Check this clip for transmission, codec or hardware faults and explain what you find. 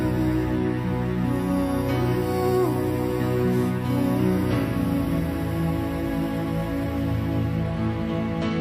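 No transmission, codec or hardware faults found; the signal path holds steady with nothing to flag.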